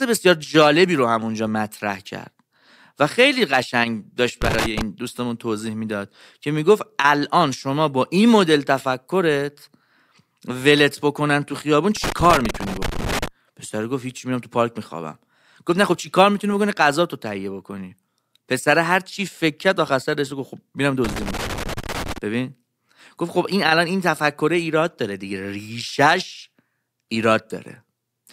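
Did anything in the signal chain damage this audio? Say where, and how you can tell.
Yes. In the speech there are three irregular bursts of scratchy crackle, from 4.42 to 4.81 s, from 11.97 to 13.28 s and from 21.04 to 22.18 s. During each one the signal breaks up into rough, uneven chopping. This is loose connector crackle in the analogue wiring. A worn or dirty contact keeps making and breaking as it shifts, so the signal is cut on and off at random, and any DC on the line turns each break into a click.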